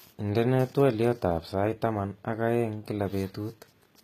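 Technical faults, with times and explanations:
Throughout: HE-AAC compression. The treble sounds bright but grainy, and s sounds come out gritty and lispy. Nothing is present above 14.9 kHz. The cause is likely low-bitrate HE-AAC coding, with damage that fits a rate around 20 kbps. Only the lower band is coded directly. The upper band is rebuilt by copying lower content upward under a coarse envelope. Its harmonics no longer line up with the real ones, so sibilants turn metallic.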